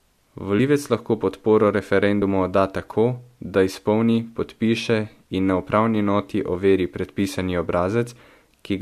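At 0.58 s, just before "lahko podporo", and at 2.21 s, between "lahko podporo" and "odda tako da izpolni", compressed frames are skipped. The decoder drops whole 23.2 ms frames, about two (roughly 50 ms) then one, so the audio jumps forward with a short smeared blip.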